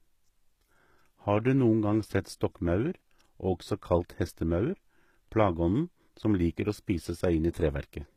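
The speech was most likely squeezed through HE-AAC compression for the whole clip, at a rate that fits a very low bitrate of around 20 kbps. Only the lower band is truly coded. The treble is rebuilt by copying lower spectrum upward under a coarse envelope, so its harmonics do not line up with those below. The top end stays bright but false, and s sounds come out gritty, metallic and lispy throughout.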